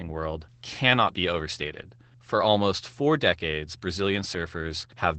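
Throughout, Opus voice compression, fitting SILK wideband coding at about 12 kbps, makes the speech muffled, hoarse and slightly robotic; a spectrogram shows nothing above 8.6 kHz.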